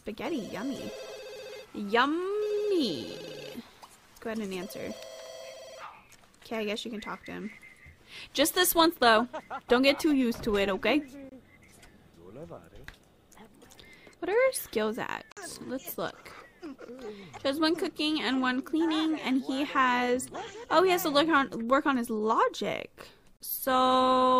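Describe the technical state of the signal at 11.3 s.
At 11.3 s there's a gap between stream segments, running from about 11.29 to 11.32 s. Two segments' timestamps don't quite meet, so the player pads the hole with roughly 25 ms of pure silence. You hear it as a sudden, hard-edged dropout, a tiny clean hole that cuts in and out with no fade. Nothing is actually missing; the audio just picks up again a fraction late.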